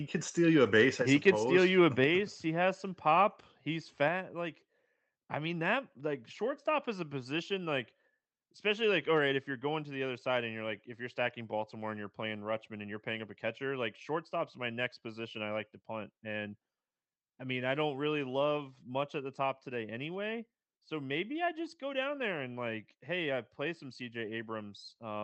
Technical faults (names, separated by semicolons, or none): microphone overload; microphone volume stepped down